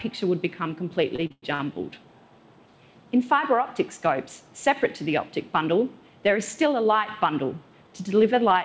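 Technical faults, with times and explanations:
1.16–1.75 s, repeated stalls (stutter): five separate hitches, the longest about 103 ms, together stretching roughly 214 ms of held-over sound across the span, close to half of it. Packets reached the receiver late, so its jitter buffer ran dry each time and the decoder extended the last sound, fading it during the longer waits, until data resumed. Nothing is lost, but the audio drags and judders, heard over a call path whose band stops at 8 kHz, consistent with a wideband codec such as G.722.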